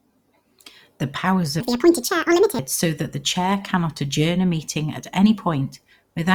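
A speech clip with one section at the wrong speed: from 1.60 to 2.59 s the audio runs about 1.73 times too fast, and its pitch jumps together with it, up by around ten semitones, so that stretch sounds high and rushed. The likely cause is playback or editing against a mismatched clock.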